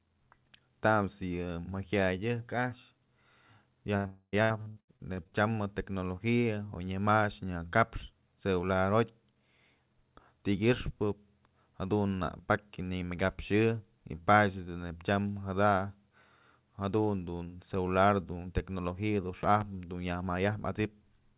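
At 3.97 s the speech breaks for about 80 ms. This is a burst of packet loss. Several packets in a row never arrived in time. The receiver stretched the last sound across the gap, so it holds briefly and fades. The speech then resumes with that stretch missing.

From 4.07 s to 4.34 s the gap continues. This is a long network dropout, likely from the connection stalling. The held sound fades over roughly a quarter of a second. Near silence lasts about 40 ms. The speech then returns, about 260 ms further on.

Between 4.42 s and 5.34 s the speech turns choppy and robotic. This is repeated packet loss. Eight separate holes appear, the longest about 83 ms. Each is patched by repeating the last sound. About 45% of the stretch is filled in this way.

Between 19.43 s and 19.64 s, two sharp pops land on top of the speech. This is a loud pop, likely from a sudden voltage spike such as a plug or switch. 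The pops peak at roughly 10 dB above the speech. The speech continues underneath.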